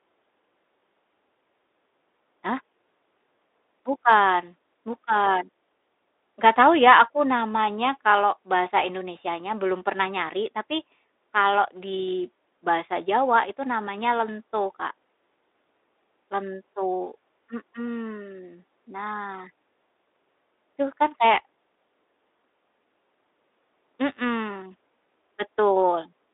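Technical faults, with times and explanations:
Nothing here counts as a fault; it's speech carried over a Speex link at 15 kbps within a 300 Hz to 3.7 kHz telephone band, working just as that path is meant to.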